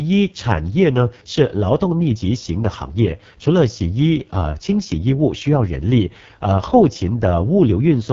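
Speech, carried throughout by the AMR wideband (HD Voice) codec, and heavily damaged: the voice sounds rough and raspy, which fits the codec's lowest mode of about 6.6 kbit/s. A spectrogram shows a hard ceiling with nothing above 7.4 kHz. The upper band near the top shows as diffuse, noise-like texture without clear harmonic lines, because the codec fills it with shaped noise. The harmonics below that look smeared and grainy.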